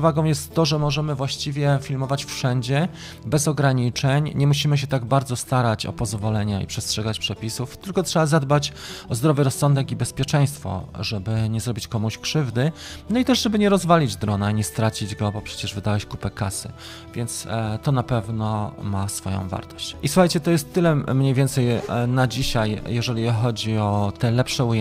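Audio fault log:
Nothing stood out on listening to this audio.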